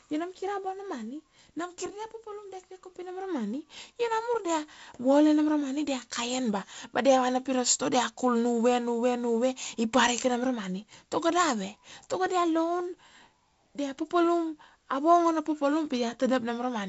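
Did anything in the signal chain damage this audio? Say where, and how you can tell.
No, the speech carries only the expected signature of G.722 wideband telephone coding: a band edge near 7.7 kHz, a light hiss in the upper band, and a slightly noisier lower band, which fits the codec running at 48 kbit/s.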